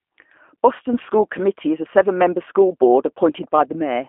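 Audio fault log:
Throughout, G.729 codec: low-bitrate vocal-tract and pulse modelling, fitting 8 kbit/s G.729A over a 250 Hz to 3.4 kHz line, leaves speech rough, synthetic and muffled.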